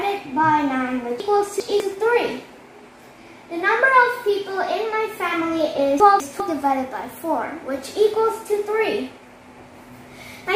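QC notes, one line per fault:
1.2–1.8 s, chunks out of order: a 200 ms chunk turns up two slots late, so it plays after the two chunks that should follow it. Nothing goes missing, but the jumbled order and three hard joins give a garbled stretch.
6.0–6.4 s, chunks out of order: same thing on a smaller scale. A 200 ms chunk lands one slot late, so two neighbouring chunks swap places. It's a brief scrambled hiccup with abrupt joins.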